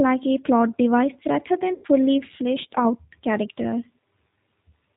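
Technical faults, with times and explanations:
throughout G.729 codec. The speech is band-limited, with nothing above 4 kHz, and the damage is plainly audible. Voicing is rebuilt from a vocal tract filter, a pitch predictor and a few pulses per frame. That leaves it rough and slightly synthetic, which fits an 8 kbit/s G.729A stream.
1.74 to 1.87 s VoIP packet loss concealed by the speech codec. Between "a plot device rather" and "fleshed out character", 100 ms of audio goes missing, which fits five lost 20 ms packets. The decoder stretches its last pitch and filter into a fading buzzy tone or coloured noise. The following frames stay weak while it recovers.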